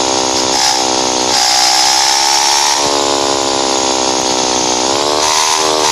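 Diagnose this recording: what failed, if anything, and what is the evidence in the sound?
Hard clipping is present across the whole recording, at a converter or level stage driven beyond its ceiling. The loudest peaks carry a brittle crackle. The signal overshoots full scale by about 5 dB, so roughly one percent of samples are cut flat, adding high harmonics.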